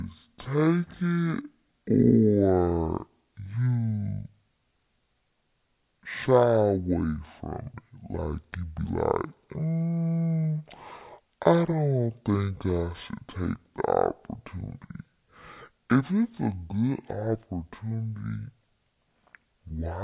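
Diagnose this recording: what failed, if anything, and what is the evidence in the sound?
The playback stage has a wrong sample rate: the speech is clocked out at half the rate it was captured at, with no resampling in between, which fits 16 kHz material being played at 8 kHz. Because every sample is held twice as long, the whole clip runs at 0.5 times normal speed and drops a full octave, 12 semitones, from start to finish. Speech comes across slow, drawn-out and unnaturally deep throughout.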